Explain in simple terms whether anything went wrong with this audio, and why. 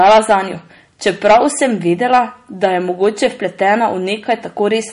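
Two things went wrong. The speech sounds watery and swirly the whole way through, with nothing above about 10.6 kHz, so the top end is dull. That points to MP3 compression, most likely squeezed into too small a file, so the encoder dropped the fine detail and the treble.

There's also hard clipping in five places: 0.0 to 0.35 s, 1.07 to 1.66 s, 2.13 to 2.19 s, 3.03 to 3.26 s and 4.31 to 4.62 s. The sound got louder than the recording chain could handle, so the loudest moments had their tops sliced flat, which you hear as crackly distortion. The first two spots are overdriven the most and the last one the least.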